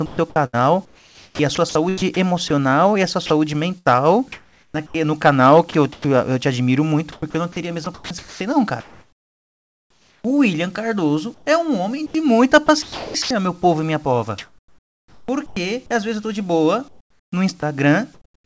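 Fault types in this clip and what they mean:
sound chopped by the voice detector: The likely cause is a sender detector switching transmission on and off repeatedly. It happens from 0.06 to 6.04 s, up to "eu te admiro muito", then 7.12 to 10.24 s, 11.34 to 13.30 s and 14.38 to 15.56 s. Quiet parts become synthetic fill, so the sound turns choppy.
comfort noise in place of the background: After "eu tô de boa", from 16.88 to 18.45 s, the real background likely gives way to generated noise while transmission pauses. About 0.76 s is replaced. The real background is lost, and a smoother noise remains.
sound dropped by the voice detector: At 17.60 s, a 20 ms piece of sound is lost. The detector likely mistook it for background and stopped sending. Steady synthetic noise fills the gap briefly, and the sound returns once transmission resumes.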